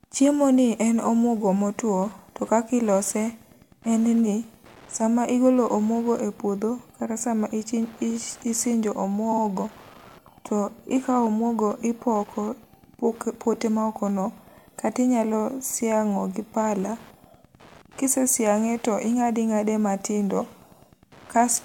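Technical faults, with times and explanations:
throughout, Wi-Fi interference: a nearby Wi-Fi radio's bursts are rectified by the audio circuit, giving a faint tick every 102.4 ms, around 30 dB below the speech.
9.32 to 9.42 s, repeated frames: a short span of compressed audio, which fits two frames of about 52 ms, plays twice more, causing a stutter that adds 104.5 ms.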